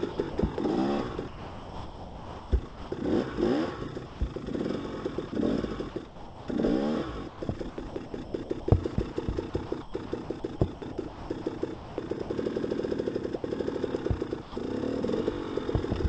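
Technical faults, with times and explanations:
0.12–0.58 s, 1.16–2.92 s, 4.06–4.36 s, 5.16–5.32 s, 5.90–6.48 s and 7.28–12.30 s: sound chopped by the voice detector. Within each stretch, pieces of sound give way to a smooth hiss and then return, more than once: about 160 ms, 1.5 s, 160 ms, 60 ms, 480 ms and 1.9 s of fill respectively. The likely cause is a sender-side detector repeatedly toggling transmission off on quieter passages, with comfort noise filling the gaps. It differs from a single dropout because the sound is cut two or more times within one stretch.
13.36–13.44 s and 14.42–14.56 s: sound dropped by the voice detector. Each is one clean gap, about 80 ms and 140 ms, where the sound simply disappears under steady noise and resumes when it is loud enough again. This is likely a detector misreading a soft passage as background and stopping transmission once, with the receiver substituting comfort noise. 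Unlike the chopped stretches, each event is a single cut rather than an on-off stutter. Throughout, the band stops at 8 kHz, consistent with a G.722 call path.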